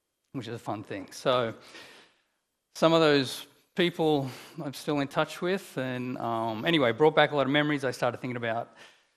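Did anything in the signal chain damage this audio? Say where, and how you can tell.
Yes. MP2 compression runs through the whole clip. The top end is dull, with upper bands flickering in and out over a gurgling, granular texture, so the damage is at the codec stage. The likely cause is MPEG Layer II starved of bits, which fits a rate near 80 kbps, switching off high sub-bands and coarsely quantising the rest.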